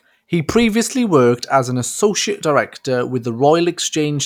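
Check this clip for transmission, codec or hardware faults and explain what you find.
I found no faults in this speech recording.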